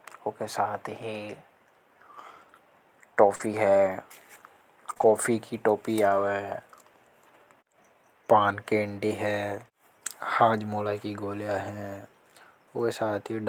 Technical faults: scattered short gaps

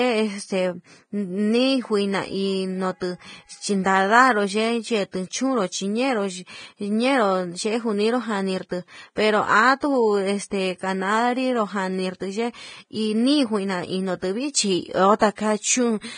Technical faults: Vorbis compression; sample clock jitter

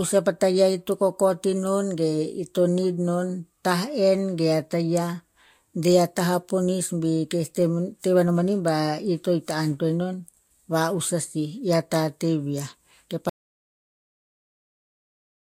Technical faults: audio dropout to silence

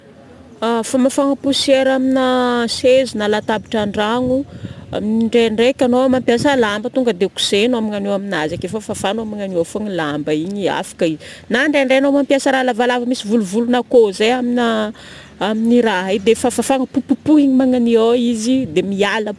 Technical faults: aliasing

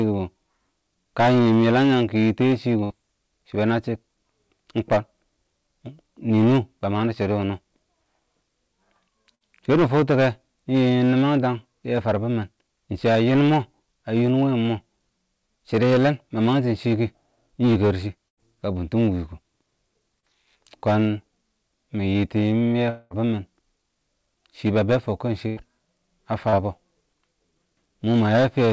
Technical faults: hard clipping; burst of packet loss; short concealed packet loss; long network dropout

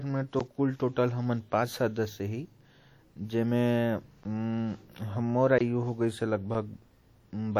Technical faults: WMA compression; block of digital silence

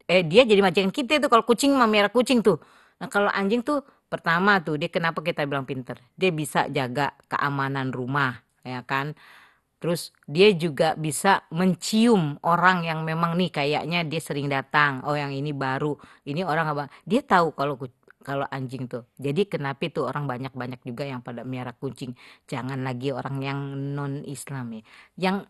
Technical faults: MP2 compression

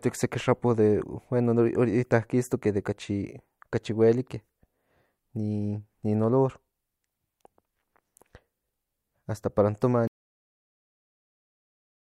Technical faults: cut-off end

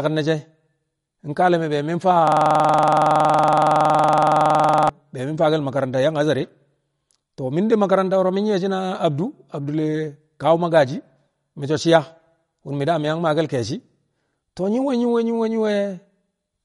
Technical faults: MP3 compression; system hang loop

